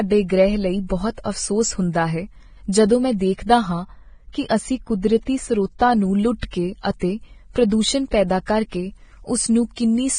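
Speech with heavy codec damage throughout: the treble is grainy and hissy, and a spectrogram shows a hard ceiling with nothing above 9.7 kHz and speckled, noisy upper bands. This is likely Vorbis compression at a low bitrate, which fits roughly 22 kbps. From 3.84 to 5.93 s, right after "ਜਦੋਂ ਮੈਂ ਦੇਖਦਾ ਹਾਂ", the sound turns dull and muffled from de-emphasis applied wrongly. A treble cut meant to undo pre-emphasis slopes the response down, to about 8 dB lower at 10 kHz than at 1 kHz, so that stretch shows visibly darker upper bands on the spectrogram.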